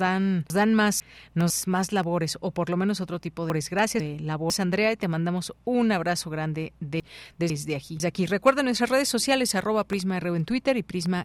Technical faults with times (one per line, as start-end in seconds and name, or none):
0.50-1.50 chunks out of order
3.50-4.50 chunks out of order
7.00-8.00 chunks out of order